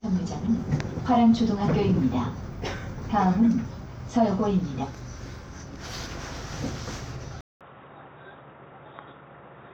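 At 7.41 s the input likely switched to a poorer device. After a 200 ms silence the sound returns a few decibels quieter, with nothing above 3.8 kHz and a faint new background noise, so it stays dull and boxy to the end.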